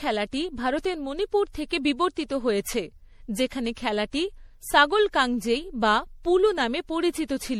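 Speech runs through the whole clip with a swirling, hollow, smeared quality and softened consonant attacks, the signature of generation loss, likely from repeated MP3 re-encoding, around five passes at a rate that sounds like 64 kbit/s. What separates it from a single low-bitrate encode is the degree: each pass re-quantised on a shifted frame grid, stacking noise and spectral holes, so the damage sounds heavier and more diffuse than that bitrate alone would produce.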